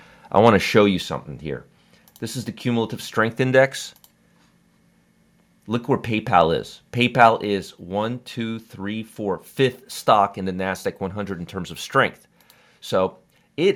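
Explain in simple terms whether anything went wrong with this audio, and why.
Microphone overload at 0.47 to 0.49 s and again at 7.21 to 7.24 s: the loudest moments of speech briefly crackle and sound harsh. The likely cause is that the microphone's input was set so high that these peaks hit the recording limit and had their tops sliced off.

Microphone volume stepped down at 1.02 s and 7.44 s: shortly after each crackly peak, the voice and background both drop in loudness all at once. This is likely the call software noticing the overload and turning the microphone's input down in a single jump.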